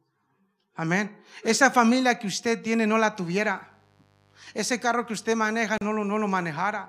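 From 3.09 s, right after "que usted tiene no", a mains buzz enters and stays to the end, roughly 40 dB below the speech. Sharp switching spikes twice per 50 Hz cycle spread harmonics into the kilohertz range, so it sounds raspy, unlike a smooth low hum.

At 5.78 to 5.81 s a gap at a join of encoded pieces cuts in: about 35 ms of silence, left by encoder start delay and end-frame padding. The edges are smeared, and the sound resumes exactly where it stopped with nothing missing, unlike a dropout.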